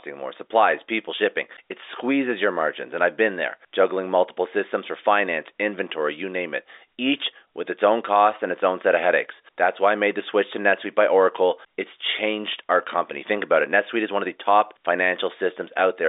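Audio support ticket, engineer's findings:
No faults found; telephone-band speech.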